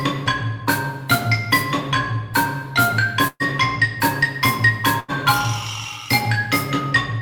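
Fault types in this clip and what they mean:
Burst of packet loss: at 3.27 s and 5.00 s the sound smears into a fading continuation, the first dying into about 40 ms of silence, then jumps ahead, skipping 120 ms and 80 ms of audio because a run of packets arrived too late or not at all.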